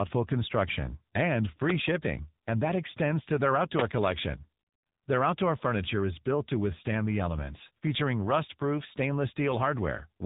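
From start to finish the speech sounds rough, muffled and warbly, with a gritty, smeared texture and nothing above about 3.8 kHz. This is tandem speech coding: the call passed through G.726 at 32 kbit/s, then G.711 mu-law at 64 kbit/s, then AMR-NB at 7.95 kbit/s. Two speech codecs sit in that chain, and the second re-encodes the first one's already degraded output, so their artefacts compound.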